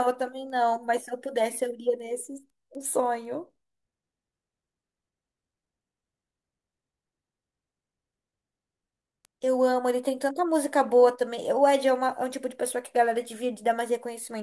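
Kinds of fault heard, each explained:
Resampler restarted on every block: from 0 to 10 s, each 250 ms chunk of speech was converted separately, so the filter lacked its true neighbouring samples at every seam. The resulting edge errors sound like steady ticks four times per second.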